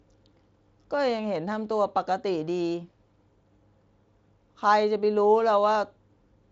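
At 1.52 s a few samples have most likely gone missing from the stream, a case of dropped samples lasting only a small fraction of a millisecond. The waveform jumps straight from one value to a later one, and that sudden step is heard as a single sharp click in the speech, a thin vertical line in the spectrum. No sound is lost to the ear. The Speex coding is working as intended, and it leaves nothing above 7.7 kHz.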